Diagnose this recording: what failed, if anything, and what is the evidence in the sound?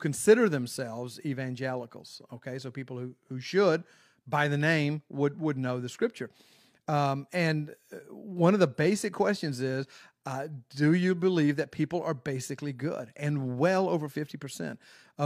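Nothing failed here as far as the ear can tell, since no stage of the chain audibly gives way anywhere in the audio, so there's no evidence of a fault to point to.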